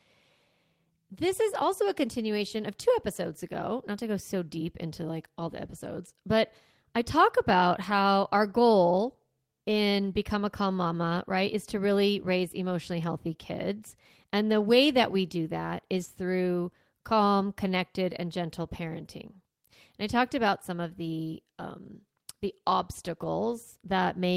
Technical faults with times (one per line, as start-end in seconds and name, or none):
16.01-16.07 lost packet rebuilt from error correction
23.21-23.27 lost packet rebuilt from error correction